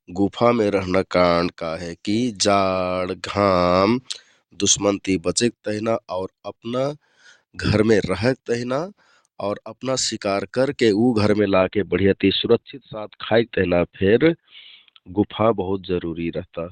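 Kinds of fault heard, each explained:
Adaptive stream at a lower bitrate: at 11.39 s the speech suddenly drops in quality and stays degraded to the end, with no gap at the switch, as the stream falls back to a leaner version. Treble is lost and codec artefacts rise, a change that points to Opus going from 64 kbit/s to 12 kbit/s. On a spectrogram, energy above 16.5 kHz vanishes at that instant, while the waveform runs on unbroken.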